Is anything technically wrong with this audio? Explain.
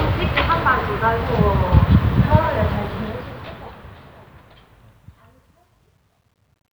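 Yes. From 2.70 s to the end at 6.75 s, the fade-out shows truncation distortion on a fade. The fade, which begins around 2.7 s, runs through a gain stage that keeps too few bits and adds no dither. The graininess points to roughly an 11-bit word length. As the level drops, the waveform collapses into coarse steps. From 4.24 s onward the quiet tail turns gritty.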